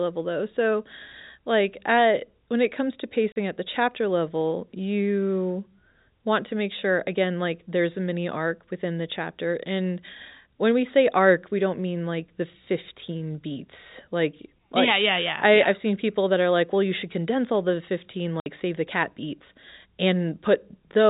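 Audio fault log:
3.32–3.36 s and 18.40–18.46 s, packet loss filled with silence: The sound drops to dead silence for 40 ms after "when it comes to" and for 60 ms just before "save the cat beats." The receiver played silence for the missing packets, so the gaps start and stop abruptly. Both lengths fit 20 ms packets.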